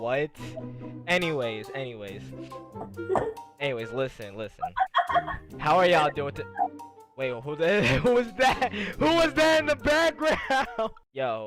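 No technical faults are audible anywhere in this audio.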